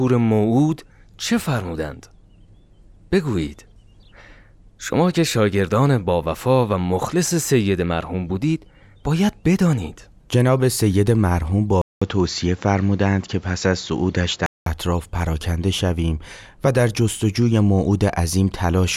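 From 11.82 s to 14.66 s the input likely switched to a poorer device. After a 200 ms gap, speech loses everything above 7.6 kHz and gains faint background noise.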